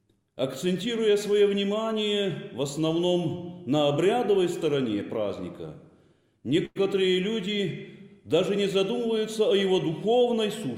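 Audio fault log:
6.65–6.77 s call audio freeze: a 100 ms fading buzz, then 20 ms of silence, and the sound resumes intact, likely from an emptied jitter buffer, adding 100 ms delay.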